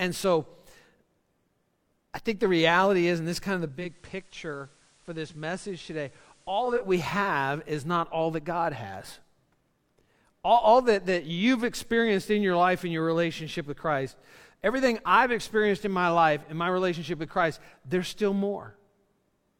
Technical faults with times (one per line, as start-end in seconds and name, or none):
3.61-6.96 digital radio blending to analogue